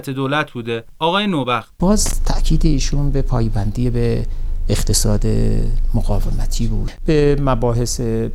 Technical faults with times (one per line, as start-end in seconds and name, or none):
2.06-2.13 loose connector crackle